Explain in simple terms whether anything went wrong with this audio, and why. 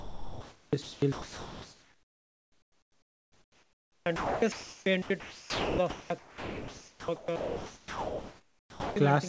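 From 0 to about 8.96 s the speech keeps cutting in and out, and about 7.9 s of that stretch is soft, even hiss. This is sound chopped by the voice detector: the sender likely mistook speech for silence and sent comfort noise instead.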